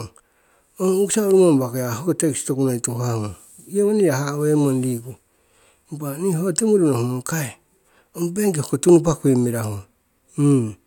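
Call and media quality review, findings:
No audible faults found in the speech recording; nothing to escalate on media or call path.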